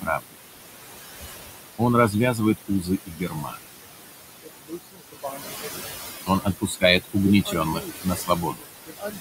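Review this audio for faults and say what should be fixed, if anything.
Noise suppressor artifacts run through the whole clip. The suppressor pulls bands it judges to be steady noise down by about 19 dB, frame by frame. The room noise, which sits only about 9 dB below the speech, drops away in the gaps and comes back under the talker. To prevent it, reduce the suppression depth or raise the noise-floor threshold so the gain changes less between frames.

Speech cut by the noise suppressor occurs at 0.01–0.36 s, 1.78–3.61 s, 4.42–5.95 s and 6.26 s to the end. The quiet parts of the speech are taken for noise and attenuated along with the background, by about 20 to 22 dB at the deepest points. Roughly a third of a second is affected in the first span, about a second in the second, under a second in the third and around a second and a half in the last. Consonants and soft endings sound swallowed there. 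To prevent it, use a voice-activity-aware suppressor with slower release and a gain floor that protects low-level speech.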